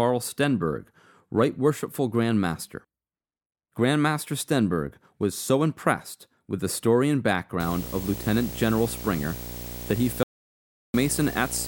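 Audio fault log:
7.6 to 11.68 s: video or display buzz. A screen or video cable leaks into the audio path, adding a 59.94 Hz field-rate buzz with hash above it and a thin 15.7 kHz line-rate whine. It sits only around 10 dB below the speech. The spectrogram shows a stack of low harmonics and a steady line near 15.7 kHz.
10.23 to 10.94 s: audio dropout to silence. The sound stops abruptly and resumes about 710 ms later, with no room tone in the gap, so that stretch of speech is simply gone. The likely cause is a lost input while recording continued. The waveform shows a flat line, and the spectrogram shows a blank vertical band.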